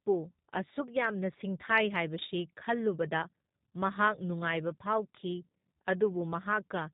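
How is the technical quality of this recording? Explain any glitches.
The recording has been squeezed through a low-bitrate voice codec from start to finish, and the damage is plainly audible. Throughout the clip, a G.729 codec, which fits G.729A at 8 kbit/s, has rebuilt the speech from a vocal tract model, a pitch predictor and a few coded pulses per frame, discarding everything above 4 kHz. The speech therefore sounds muffled, slightly rough and synthetic.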